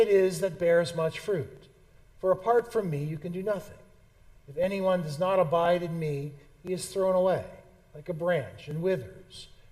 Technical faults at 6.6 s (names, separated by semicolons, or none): periodic USB or driver dropouts